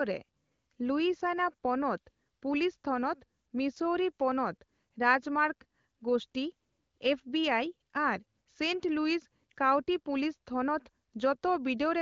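No technical faults can be heard anywhere in the recording. The speech is carried by an AMR wideband (HD Voice) codec at a rate that sounds like one of its higher modes, around 16 kbit/s, so it stays clear with only light coding texture.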